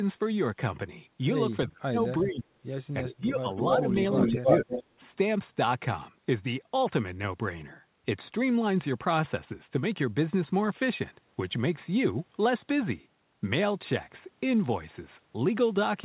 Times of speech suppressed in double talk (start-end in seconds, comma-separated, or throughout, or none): 1.68-2.72, 3.04-3.48, 3.74-4.74